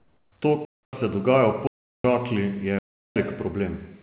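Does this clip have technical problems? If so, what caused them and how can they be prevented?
Yes. There are two kinds of fault.

Comfort noise in place of the background runs from 0.0 to 0.32 s. The real background, about 44 dB below the loud parts, gives way to a flat, featureless hiss. That hiss sits about 6 dB quieter. The likely cause is discontinuous transmission. The sender stopped sending during the pause, and the receiver synthesised noise to fill it. Prevention: disable discontinuous transmission, or tune the voice detector so real background passes through.

Blocks of digital silence cut the sound three times. The first runs from 0.65 to 0.93 s, about 279 ms, just before "se dogaja". The others run from 1.67 to 2.04 s and from 2.79 to 3.16 s, each about 372 ms. That length fits a 16384-sample block. Each gap cuts out with no fade. The output buffer was not filled in time. Prevention: enlarge buffers or give the audio thread priority so it never underruns.

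The call path's G.711 coding is audible too, with nothing above 4 kHz.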